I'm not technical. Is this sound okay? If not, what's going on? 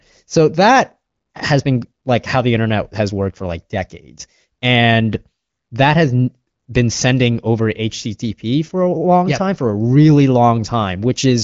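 Yes, nothing's wrong here.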